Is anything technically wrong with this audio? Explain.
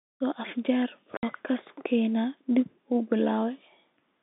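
Yes, there is one fault. Packet loss filled with silence, from 1.17 to 1.23 s: about 60 ms of the speech drops out completely, which fits two lost 30 ms packets. The receiver played silence instead of concealing the gap, so the speech cuts off and resumes abruptly at hard edges. The narrow telephone band of the G.711 coding can be heard throughout.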